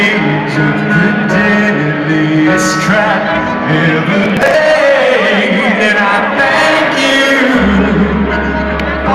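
From 4.24 to 4.61 s, processor overload crackle. Many short buffers, around 10 ms each, miss their deadlines and are skipped. The resulting gaps form a gritty tearing burst.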